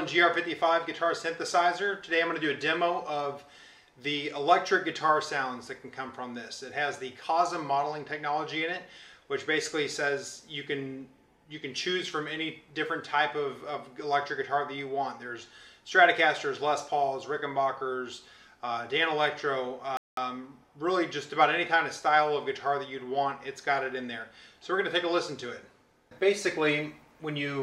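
At 19.97 s the audio drops to silence for about 0.2 s, then resumes exactly where it stopped: a rebuffering stall, the player briefly running out of downloaded data.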